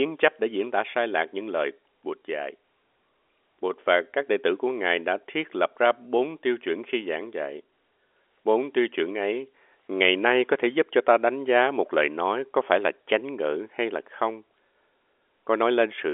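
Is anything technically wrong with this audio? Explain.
No, nothing in this speech clip is technically wrong. It carries the narrow band of G.711 telephone coding, with the sound sitting roughly between 300 Hz and 3.4 kHz and nothing present above about 3.6 kHz, as expected from an A-law phone line.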